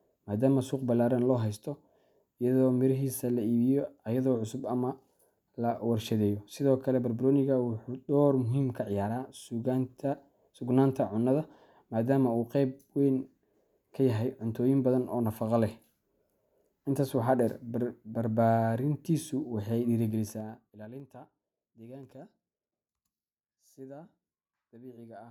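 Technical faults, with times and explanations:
20.03–21.08 s zipper noise: the speech level falls by roughly 20 dB in unsmoothed 3 dB jumps, about seven a second, each jump leaving an audible tick.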